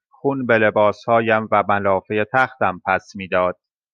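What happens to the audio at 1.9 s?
Two unsynchronised clocks likely drift apart, so single samples slip roughly every 0.7 s between 0.78 and 3.25 s, giving faint regular clock slip clicks.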